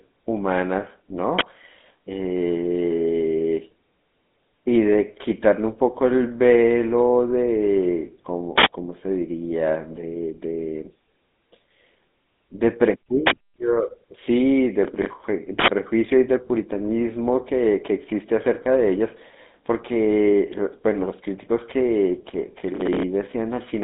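Throughout, the speech has passed through the GSM full-rate codec. That early cellular coder models the vocal tract and drives it with a sparse, regularly spaced pulse excitation, which fits a bitrate around 13 kbps. The line band runs from about 200 Hz to 3.6 kHz, with nothing above 3.8 kHz, so the sound is thin and muffled. The coding damage is plainly audible as a buzzy, gravelly roughness laid over every syllable.

From 14.82 to 15.13 s there is processor overload crackle. The processor could not fill its small audio buffers in time, which suggests blocks of around 10 ms, and roughly ten deadlines in a row were missed. Each miss repeated a fragment of old audio with hard edges, and the chain of repeats comes through as a gritty, tearing crackle riding on the speech. It stops as soon as the load eases.

From 15.60 to 15.68 s an uninitialised buffer was sent to the output before any audio had been written into it. 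Whatever data was left in memory played as samples, which fits a 4096-sample block. The result is an abrupt, loud burst of digital noise about 85 ms long that cuts sharply across the speech and ends just as suddenly.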